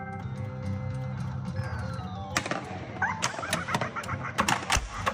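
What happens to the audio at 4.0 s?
Nothing goes wrong at 4.0 s; the audio plays through that moment intact, with no dropout, click or other disturbance.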